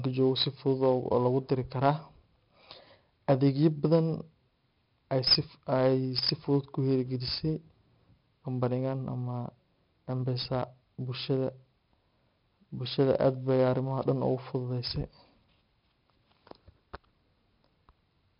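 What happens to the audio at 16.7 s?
4-bit ADPCM compression affects 16.7 s, as it does the whole clip. Each sample is coded as a coarse 4-bit step from a prediction, so gritty hiss rides every loud syllable and sharp onsets distort. Nothing survives above 5.3 kHz, which dulls the speech.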